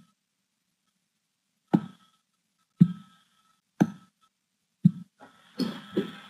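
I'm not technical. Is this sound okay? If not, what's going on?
Yes, no faults heard.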